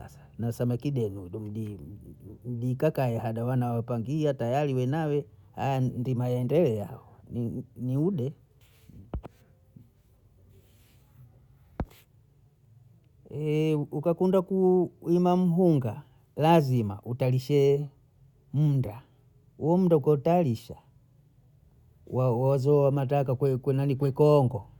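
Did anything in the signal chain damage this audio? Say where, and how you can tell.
No, nothing in the signal chain audibly damaged this speech recording, and no stage from capture through playback leaves a trace that can be heard.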